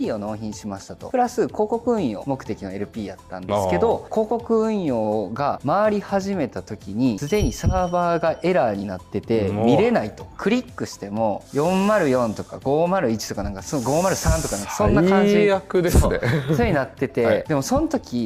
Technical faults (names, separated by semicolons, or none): none